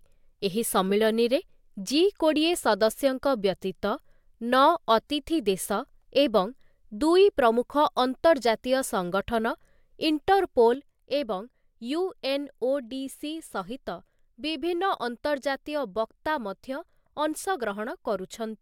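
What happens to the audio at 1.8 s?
Nothing goes wrong at 1.8 s; the audio there is intact, with no dropout, click, distortion or other fault.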